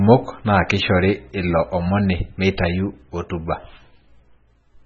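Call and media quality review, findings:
Speech sounds watery and swirly throughout, with smeared attacks. Nothing above 7.1 kHz. Likely MP3 compression at a very low rate, which fits about 16 kbps. The starved encoder cuts the treble and drops weak spectral lines frame to frame. Heavy damage.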